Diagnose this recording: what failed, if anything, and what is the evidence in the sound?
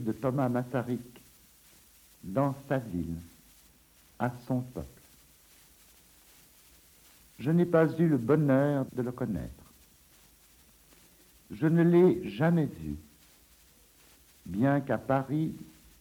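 Nothing stood out on listening that would point to a failure at any stage of the chain.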